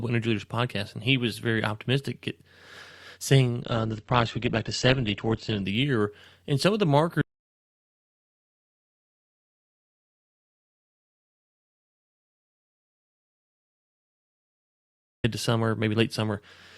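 From 3.62 to 5.62 s the speech drops to an adaptive stream at a lower bitrate. The change is sudden, with no gap. Codec artefacts rise and nothing remains above 8.1 kHz. The sound points to a step from roughly 64 to 12 kbit/s Opus.

At 7.22 s comes an audio dropout to silence, lasting until 15.24 s, about 8 s. The speech cuts out mid-flow and the gap holds no room tone. The input was likely lost through a disconnected device, a failed link or a stray mute.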